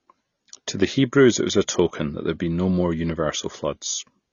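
A speech recording carries AAC compression damage from start to finish. Nothing reaches above 7 kHz, and the remaining band sounds dull and smeared, with a warbling, fizzy texture on sustained sounds and sibilants. That pairing separates it from a simple low-pass filter, which would dull the top cleanly without the swirling artefacts. The cause is likely AAC-LC encoding at a low rate, with the audible damage pointing to around 24 kbps.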